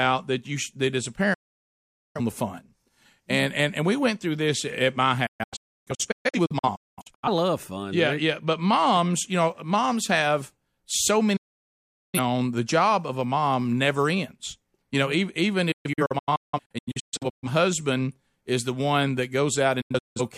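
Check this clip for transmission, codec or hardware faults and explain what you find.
The speech has a transmission fault: digital broadcast dropout at 1.34–2.21, 5.26–7.29, 11.36–12.19, 15.72–17.48 and 19.81–20.21 s. The receiver mutes on corrupted frames with a fast 8 ms fade, leaving silent holes, scattered in the second, fourth and fifth events.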